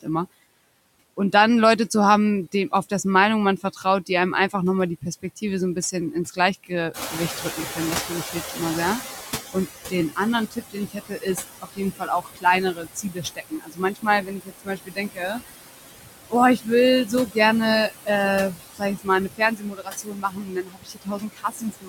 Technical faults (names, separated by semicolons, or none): noise suppressor artifacts; speech cut by the noise suppressor; noise suppressor catching up